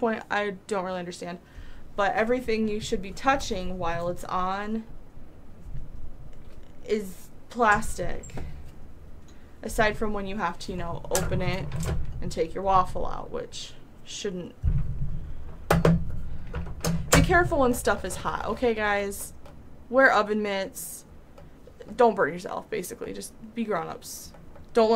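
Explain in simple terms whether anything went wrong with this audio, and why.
Something did go wrong, briefly, at 18.20 s. It is a fault called chunks out of order: a tiny slice of the audio, about 5 ms long, arrived one slot late and was played after the slice that should have followed it. You hear a quick garbled moment where the sound stumbles. What sets it apart from a dropout is that nothing is missing; every bit of audio is there, just swapped, which is why it sounds jumbled rather than silent.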